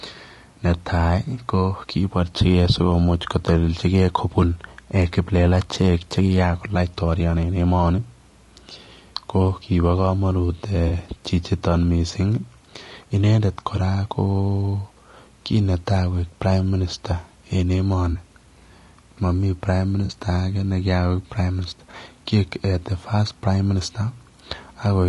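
From the start and through the whole speech clip the voice is rough and grainy, with hiss filling the gaps between harmonics and a thin, synthetic-sounding top band. The likely cause is low-delay AAC compression (AAC-ELD) at a rate around 32 kbps, whose short frames blur pitch harmonics. Unlike broadband background noise, this graininess follows the voice and vanishes in pauses rather than sitting under everything.

Four brief AAC frame losses with concealment interrupt it: 10.87 to 10.92 s, 18.11 to 18.17 s and 20.05 to 20.11 s, each lasting 40 ms (consistent with two 20 ms frames), and a single-frame 20 ms gap near 21.91 s. In each, the decoder patches the hole by repeating the last good spectrum with scrambled phase, so the sound smears into a short noisy, phasey blur. These patches are not silent dropouts or clicks, and all are too short to fade to silence.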